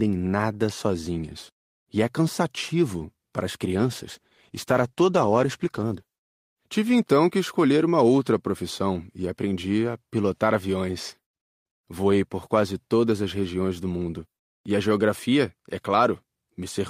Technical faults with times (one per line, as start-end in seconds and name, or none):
3.68-6.83 call bitrate drop